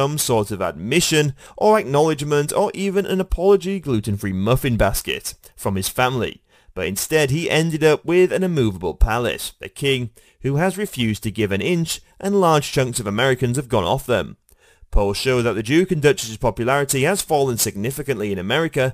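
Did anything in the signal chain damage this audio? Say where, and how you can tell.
No, nothing in the chain audibly damaged it.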